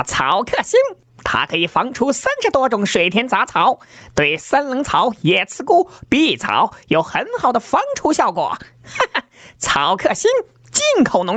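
Gain pumping runs throughout, with swings of around 20 dB, likely from a fast limiter fighting excessive gain.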